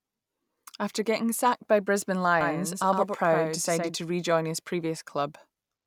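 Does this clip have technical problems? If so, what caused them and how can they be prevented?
Yes. From 2.41 to 3.95 s the speech has a doubled audio track: a full-band copy about 100 ms behind and roughly 5 dB quieter, most likely from a second, slower capture path. It starts and stops abruptly, with no decay. A spectrogram shows every onset repeated, shifted right. Route each source through one capture path only.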